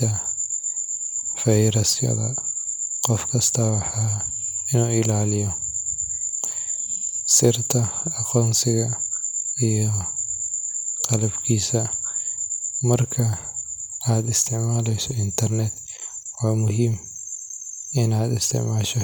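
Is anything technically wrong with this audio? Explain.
No, nothing technically wrong can be heard in this speech recording. The audio runs without any interruption or defect that a careful listener would pick out.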